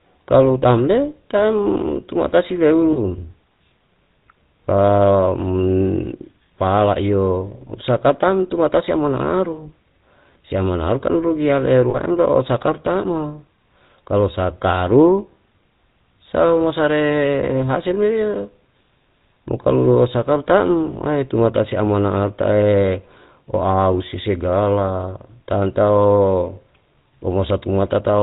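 From the first second the speech carries the buzzy, gravelly roughness of the GSM full-rate codec, which fits the 13 kbps full-rate coder. The codec models the vocal tract and drives it with a sparse, regularly spaced pulse excitation, so voiced sounds turn raspy rather than smeared, and nothing reaches above 4 kHz. Unlike a plain low-bitrate MP3 or a simple band-limit, the damage sits inside the voice's texture as a steady coarseness.

At 2.92 s and again at 11.9 s there are lost GSM frames, each gap about 40 ms long, which fits two 20 ms frames. The decoder fills each gap by repeating the last good frame's settings, so the sound hangs briefly as a rough, metallic ring. A dropout would go silent, and a click would be instantaneous. Both gaps are short, so the ring never fades out fully.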